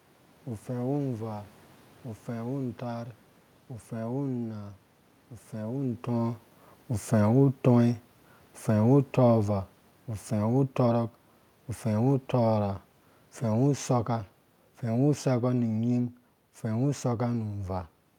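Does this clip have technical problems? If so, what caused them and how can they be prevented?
Yes. Automatic gain falling: from 6.11 s to 17.37 s the level sinks gradually by about 9 dB. The room noise drops along with the speech because the gain control judged the input too loud, or its background noise too strong, and kept lowering its gain. This is separate from the talker's own level shift around 5.5 s. To prevent it, set a fixed input gain with adequate headroom, or disable the automatic gain control.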